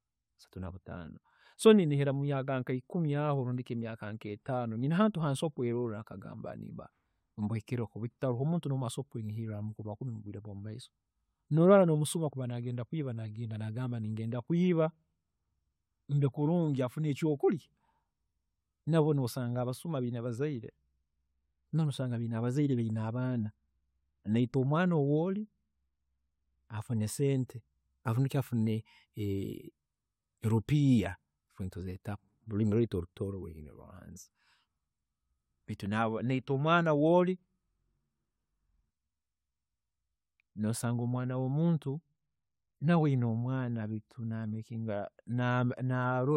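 No technical faults can be heard anywhere in the speech. Nothing in the recording calls for a time stamp or an explanation.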